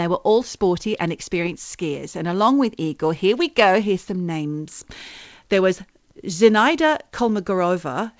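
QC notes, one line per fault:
No fault to note in this speech; the call path's G.722 coding leaves nothing above 8 kHz, as expected for it.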